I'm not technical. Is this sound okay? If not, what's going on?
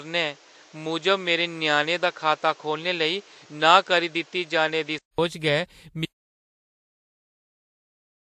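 No. From the start to 5.18 s the speech sounds dull and muffled, with nothing above 8 kHz and a background noise of its own. At 5.18 s, after a brief 0.2 s gap, it suddenly clears. That abrupt change points to an input switched to a poorer device, likely a lower-quality microphone, rather than steady muffling.

From 6.06 s to the end there is an audio dropout to silence: total, dead silence with no background hiss at all, unlike a natural pause where room sound remains.

Throughout, there is a mix of two different kinds of compression blur and swirl, with nothing above 16 kHz. This likely comes from transcoding between lossy codecs, with the file saved in one compressed format and then re-saved in another.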